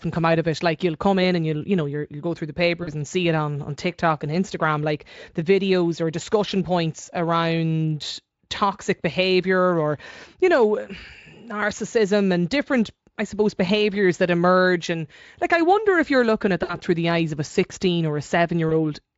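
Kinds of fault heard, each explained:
VoIP packet loss concealed by the speech codec: packets were lost and the Speex decoder bridged each gap by repeating its last pitch and filter at falling gain, so near 2.83, 16.63 and 18.69 s, spans of 40, 60 and 20 ms smear into a fading buzz or coloured noise.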